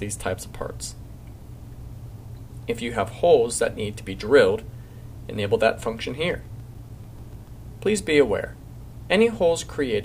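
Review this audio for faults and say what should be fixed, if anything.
CD scratch ticks run from 6.31 to 7.48 s: nine short clicks, roughly seven or eight per second, each lasting at most a few milliseconds. A blemish on the disc corrupts more data than error correction can restore, once per revolution, so the player conceals the damaged samples by interpolating or muting. On a waveform these appear as evenly spaced tiny notches or spikes. A spectrogram shows thin vertical broadband lines at regular intervals. To prevent this, clean or replace the damaged disc, or re-rip it with a secure, error-checking ripper.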